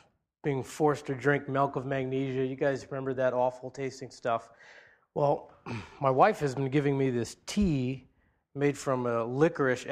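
No technical faults are audible anywhere in this audio.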